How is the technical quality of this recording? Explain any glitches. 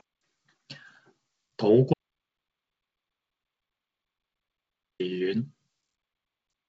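The recording has one serious glitch: an audio dropout to silence that removes about 3.06 s of the speech. From 1.94 s to 5.00 s the sound stops mid-flow and then returns just as abruptly, with no room tone in the gap. This is silence, most likely because the input was lost through a disconnected device, a failed link or an accidental mute while the recorder kept writing silence. On a waveform it appears as a dead flat line. On a spectrogram it is a completely black block across all frequencies, framed by wideband telephone-style content that ends near 7.3 kHz, as expected from G.722 coding at 64 kbit/s.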